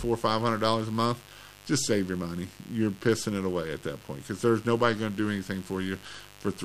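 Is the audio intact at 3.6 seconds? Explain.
No, mains buzz runs through the whole clip, including 3.6 s. Switching spikes twice per 50 Hz cycle leak in, spreading harmonics up to several kHz, roughly 25 dB below the sound. Unlike smooth, low hum, it sounds raspy and edgy.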